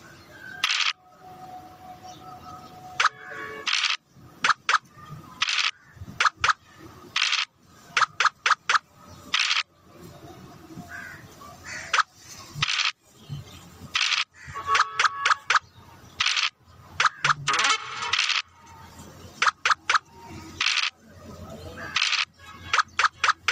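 Gain pumping runs right through the clip, with the gain swinging around 20 dB. It's likely a fast limiter or compressor clamping down on gain set far too high, leaving everything squashed.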